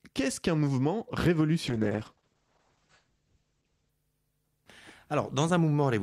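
From 1.68 s to about 3.97 s there's a call bitrate drop. The bandwidth estimate fell, so the encoder started spending far fewer bits, which fits a fall from around 48 kbps to roughly 10 kbps, held low for about 2.2 s. The speech goes rough and watery, and the top end gets chopped, with the audio band shrinking from 20 kHz down to 8 kHz, so it sounds muffled until the rate recovers.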